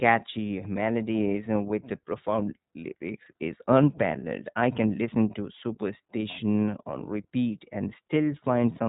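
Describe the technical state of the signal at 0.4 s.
At 0.4 s the speech is going through the iLBC codec, which codes each 20 ms frame independently and passes nothing above 3.8 kHz, making it plainly muffled, rough and synthetic throughout.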